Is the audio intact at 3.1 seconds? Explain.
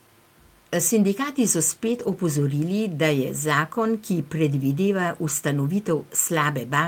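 Yes, at 3.1 seconds the speech plays through intact, with no dropout, click, distortion or other fault at that point.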